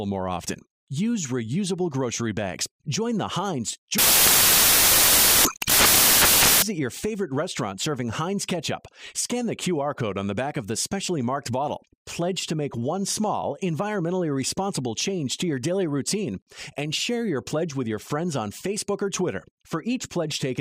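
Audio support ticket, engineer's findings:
Samples built from the wrong bytes, 3.98 to 6.62 s: loud, harsh broadband noise replaces the audio. Probable component is the sample reader, which misassembles byte order or alignment so the low bits dominate.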